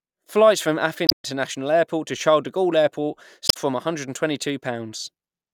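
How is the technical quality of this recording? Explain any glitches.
Two short glitches break up the speech. From 1.05 to 1.25 s and again from 3.47 to 3.57 s there are brief blips, the sound of damaged data in a compressed stream: corrupted bytes make the decoder misread frames and lose sync until it finds the next frame header.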